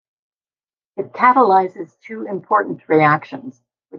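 No technical faults can be heard anywhere in the speech. There is nothing at any point in the recording to describe as going wrong.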